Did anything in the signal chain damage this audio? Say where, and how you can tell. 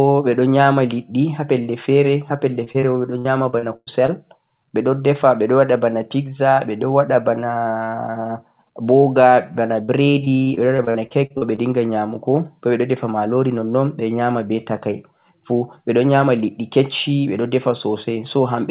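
Yes, repeated packet loss on the network. After "ha pelle", 2.64 to 4.10 s, and again 9.84 to 11.91 s, lost packets are patched by stretching the previous sound, giving choppy, robotic speech.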